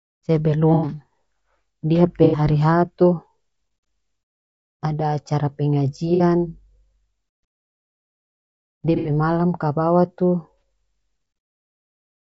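Throughout the clip the speech has a rough, grainy texture, with noise filling the gaps between pitch harmonics and a top band that sounds thinned and somewhat synthetic. The damage is plainly audible. This likely comes from low-delay AAC compression, specifically AAC-ELD, at a bitrate consistent with about 32 kbps. Its short frames resolve harmonic structure poorly, so at this rate the coder cannot spend enough bits to keep the voice clean.

AAC frame loss with concealment occurs five times: at 0.74 to 0.88 s, 2.24 to 2.39 s, 6.14 to 6.23 s, 8.96 to 9.10 s, and at 10.59 s. The gaps run about 90 ms, 90 ms, 60 ms, 90 ms and 30 ms, which fits runs of three, three, two, three and one lost frames. In each gap the decoder rebuilds the audio from the last good spectrum, so these spots sound like brief smeared, noisy or phasey patches rather than silence.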